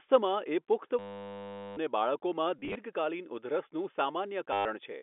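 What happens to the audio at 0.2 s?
Nothing goes wrong at 0.2 s: the speech there comes through intact, carried by the narrow telephone band of G.711 coding without any break or damage.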